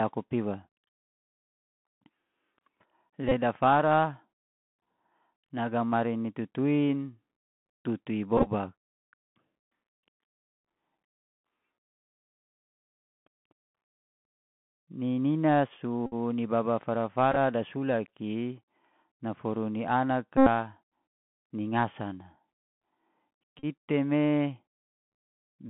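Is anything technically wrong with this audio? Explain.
Yes. The speech has been through a Bluetooth CVSD headset codec for the whole clip, and it has six moments where the Bluetooth headset packet was repeated.

The CVSD narrowband damage is plainly audible throughout. The band runs only from about 150 Hz to 3.4 kHz, which fits a 64 kbps one-bit delta stream. The encoder sends a single up-or-down bit per sample with an adapting step. Loud, fast-rising sounds outrun that step and distort, s sounds turn scratchy, and a grainy hiss sits under everything. On a spectrogram, nothing appears above about 3.4 kHz, and a noise floor fills the gaps between syllables.

The repeated packets occur at 3.29–3.32 s, 8.37–8.49 s, 16.06–16.14 s, 17.32–17.37 s, 20.37–20.47 s and 23.59–23.65 s. When packets drop, the chip decodes the previous packet's bits again. That repetition every 3.75 ms produces a rough buzz near 267 Hz in place of the lost audio. 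The buzz lasts about 26 ms at 3.29 s, 56 ms at 16.06 s, 38 ms at 23.59 s and 90 ms at 20.37 s, the longest. At 8.37 s about 56 ms is lost, scattered over 90 ms in runs of roughly 10 ms at most. At 17.32 s about 23 ms is lost across 45 ms in runs of about 7 ms, so these two sound broken rather than steady. On a waveform each repeat shows as an identical short block copied end to end. On a spectrogram it appears as vertical striping with harmonics spaced 267 Hz apart.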